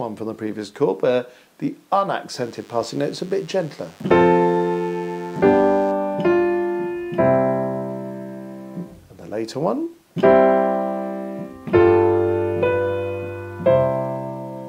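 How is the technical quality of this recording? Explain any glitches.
One fault affects this recording: a burst of DECT cordless phone buzz from 2.4 to 5.92 seconds. A DECT handset or base station close to the recording gear transmits a short radio pulse every 10 ms, and some part of the audio circuit rectifies that energy into the signal. The result is a steady, thin buzz at 100 Hz with a long series of harmonics, sitting about 30 dB below the main audio and stopping at 5.92 seconds.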